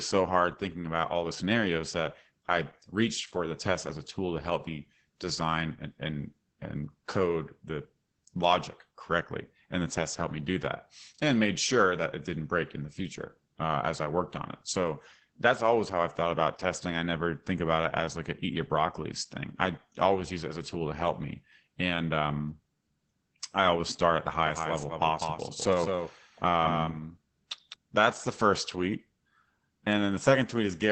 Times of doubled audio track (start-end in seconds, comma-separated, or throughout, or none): 24.46-27.74